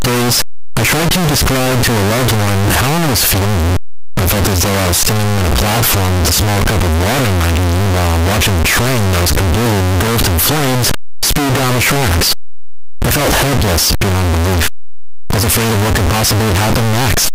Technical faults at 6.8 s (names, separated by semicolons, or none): signed and unsigned mixed up